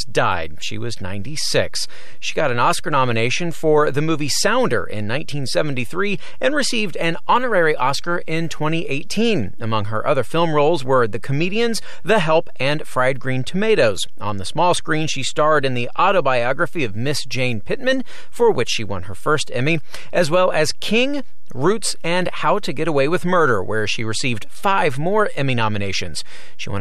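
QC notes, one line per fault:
Throughout: DC offset. The whole waveform sits shifted off zero by about -20 dBFS, so you won't hear it, but it eats headroom and parks steady energy right at 0 Hz.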